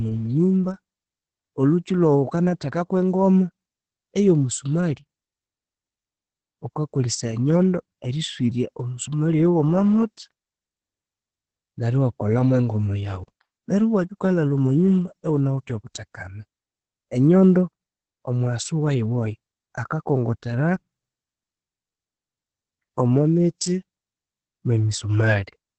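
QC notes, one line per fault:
throughout: Opus voice compression, heavy. Nothing survives above about 8.7 kHz, and the speech sounds muffled, hoarse and slightly robotic, which fits the SILK coder at roughly 10 kbps coding the excitation coarsely. A plain low-pass filter would dull the top without this buzzy roughness.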